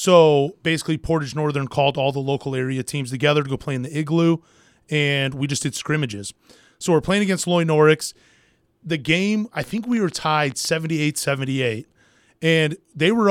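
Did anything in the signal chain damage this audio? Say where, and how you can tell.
Yes. A train of clicks runs from 9.64 to 10.87 s, starting just after "game I". Roughly fifteen near-identical pulses arrive at about 13 per second, but unevenly spaced, and they peak at around the level of the speech itself. They are most likely electrical interference coupling into the analogue wiring, or a faulty connection or power supply injecting repeated impulses, which puts a ragged ticking over the speech and into its pauses.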